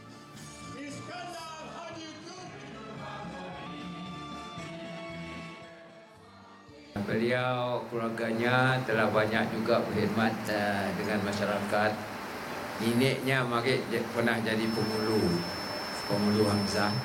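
From 1.83 to 3.66 s, the sound slows by about 5.7 percent. Pitch drops about 102 cents, roughly a semitone, then snaps back. From 10.26 to 10.91 s, the opposite happens: playback runs 5.7 percent fast and pitch rises about 96 cents. Both are drift correction steps. The likely cause is clock-matching software changing the playback rate in one jump to refill, then drain, its buffer. Each is heard as a sudden detuning.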